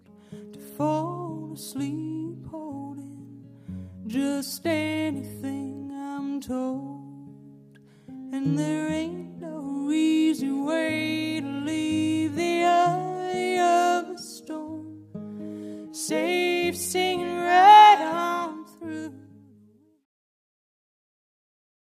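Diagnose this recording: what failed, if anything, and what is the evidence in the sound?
Nothing failed here; I can't hear any fault from any stage of the chain, so there's nothing to diagnose.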